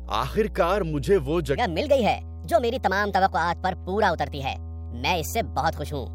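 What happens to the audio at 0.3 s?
At 0.3 s, mains hum sits under the speech, as it does for the whole clip. It is a steady low tone at 60 Hz. The level is high, roughly 10 dB below the speech. A ground loop or nearby transformer is leaking power-line current into the signal.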